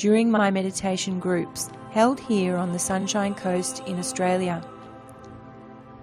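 Short stretches of the audio replay at 0.36–0.41 s and 3.01–3.03 s. These are repeated frames: roughly 46 ms and 23 ms blocks play twice, unlike dropouts, which lose audio rather than duplicating it.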